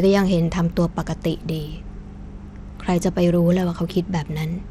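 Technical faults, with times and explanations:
Throughout, likely Bluetooth SBC compression: starved upper sub-bands make the speech's treble flicker under gritty noise, fitting a 96 kbps stream, harsher and less swirly than MP3.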